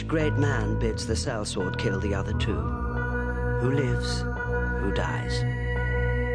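No faults can be heard anywhere in the clip.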